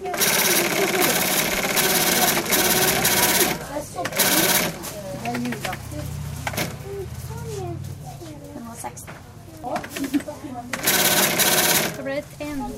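At 6.57 s, damaged data in the compressed stream makes the decoder lose sync and search for the next frame header, giving a brief glitch. The waveform shows a discontinuity.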